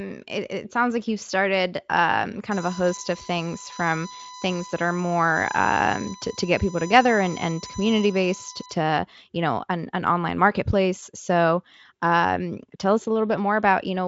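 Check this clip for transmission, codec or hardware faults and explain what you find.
One hardware fault is audible: USB whine from 2.51 s to 8.74 s, starting after "like you've started um" and ending before "you know an an". A steady 1 kHz whine sits under the speech, fairly strong at roughly 15 dB below it. The USB bus's 1 ms frame timing leaks into the audio through shared power or ground, and that frame rate is exactly what produces a 1 kHz pitch. Mains hum would instead sit at 50 or 60 Hz and its low harmonics. Acoustic feedback would swell and build rather than hold one steady level. The speech itself passes through a Speex codec with its band ending near 7.6 kHz.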